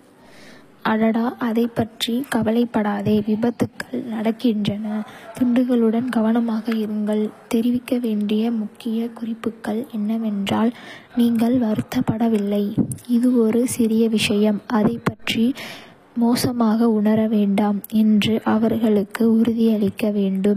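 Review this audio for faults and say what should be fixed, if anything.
The s sounds are gritty and lispy for the whole clip, and the treble is synthetic, ending near 15.5 kHz. This is likely HE-AAC compression at a low bitrate, around 24 kbps. The codec rebuilds the upper band from copied lower bands, so its harmonics do not line up. To prevent it, encode at a higher bitrate or use plain AAC or a lossless format.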